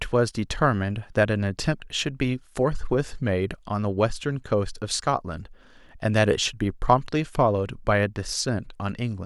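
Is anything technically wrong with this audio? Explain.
No, nothing technical stands out here; the speech comes across steady and untroubled all the way.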